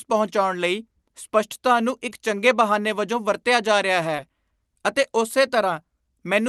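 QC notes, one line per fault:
2.09–2.13 s and 4.17–4.20 s, short concealed packet loss: after "ਪਹੁੰਚਾਉਣ ਲਈ ਸਪੱਸ਼ਟਤਾ ਨੂੰ" and after "ਜਾ ਰਿਹਾ", about 20 ms of audio is missing. The decoder covers roughly 14 ms by extending the preceding sound, causing a brief smear.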